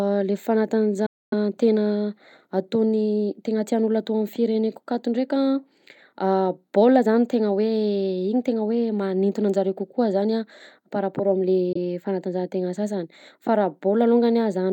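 Audio packets likely failed to reach the headphones in time, a Bluetooth dropout. The speech cuts to silence from 1.06 to 1.34 s, then briefly from 11.73 to 11.77 s between "par raport" and "fanatanjahantegna sasany fa", resuming as though it had played on.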